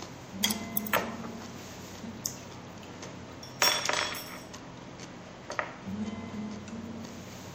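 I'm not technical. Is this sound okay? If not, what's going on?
No. The whole clip, all 7.5 seconds, has plainly audible MP3 compression damage. It is likely the result of saving the sound as a small MP3 file. The encoder kept only the parts it judged most important. Faint details flicker in and out, which gives a watery, swirly quality. Sharp sounds lose their crispness and smear. The very highest treble is missing too, cut off above 18.7 kHz.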